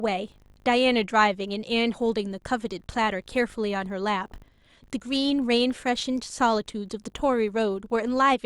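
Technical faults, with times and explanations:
Throughout: filter restarted on every block. A 50 Hz buzz sits under the speech, which points to 20 ms blocks. At each block edge the filter drops its memory and starts from zero. Each restart leaves a small click that swells with the speech level.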